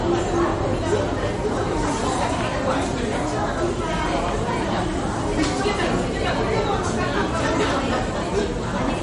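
Throughout the clip the sound has a hard treble ceiling, with nothing above 10.6 kHz, plus a watery, swirling texture and smeared attacks. That is likely MP3 compression at a low bitrate, consistent with about 40 kbps, where weak frequency lines drop in and out between frames.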